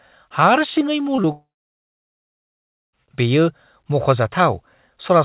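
At 1.16 to 1.20 s and again at 1.22 to 1.26 s there are two instances of short concealed packet loss. In each, about 20 ms of audio failed to reach the decoder in time, and the receiver patched the gap by extending the preceding sound before blending back into real signal. Each is heard as a brief smear or wobble. On a spectrogram each shows as a narrow vertical band where the signal is a continuation of what came just before. Because the call path carries nothing above 4 kHz, these patches sit within the same band-limited signal.

From 1.32 s to 2.95 s about 1.6 s of audio is missing, likely a long network dropout. The receiver first continues the last sound as a short buzz or hiss that fades. After that comes roughly 1.5 s of near silence, and the audio then resumes with that section lost. A spectrogram shows a brief decaying smear followed by a wide, almost empty gap. The waveform shows a short tapering tail and then a flat line.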